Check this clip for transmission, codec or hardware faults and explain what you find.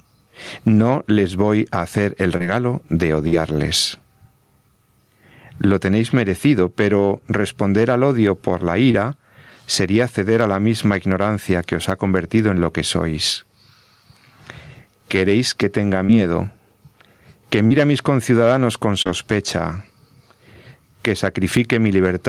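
Three faults are audible in this speech clip: gain pumping throughout, five short concealed packet losses, and one burst of packet loss.

Gain pumping runs through the whole clip. The swing is large, about 15 dB. The likely cause is a microphone gain set far too high, with a fast limiter clamping each loud syllable. Loud and quiet passages sit close in level. The speech sounds squashed.

Short concealed packet loss occurs at 2.37 s, 8.91 s, 16.05 s, 17.67 s and 19.02 s. At 16.05 s it follows "queréis que tenga". At 17.67 s it comes just before "a mis conciudadanos con". At 19.02 s it follows "a mis conciudadanos con". Each gap is 20 to 40 ms of missing audio. The decoder extended the preceding sound to cover it, then crossfaded back. Each is a brief smear or wobble, and a consonant can drop out.

A burst of packet loss runs from 3.28 to 3.39 s. About 40 ms of audio never arrived. The receiver filled roughly 48 ms by continuing the last sound and fading it down. 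Then it skipped about 12 ms to resync. The result is a short held buzz or fading hiss. Speech resumes slightly ahead, with a small piece gone.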